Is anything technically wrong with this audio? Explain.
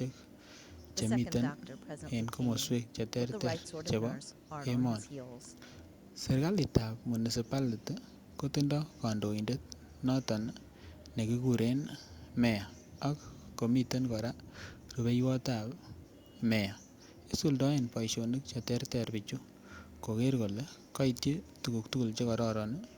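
No, nothing technically wrong can be heard in this speech recording. The signal stays steady and continuous, with no defect worth flagging at any point.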